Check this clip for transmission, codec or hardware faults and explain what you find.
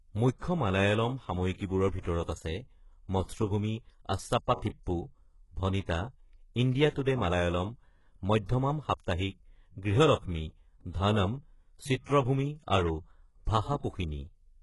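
Two codec faults are present, and no transmission or hardware faults.

Throughout, the speech shows heavy HE-AAC compression damage, likely from a very low bitrate around 12 kbps. Rebuilt treble sounds gritty and metallic, and nothing remains above 11.5 kHz.

Pre-echo occurs at 2.00 to 2.05 s (48 ms), 7.04 to 7.06 s (20 ms) and 8.45 to 8.49 s (42 ms). The block's quantisation noise leaks ahead of sharp attacks, putting brief hiss before each onset and smearing it.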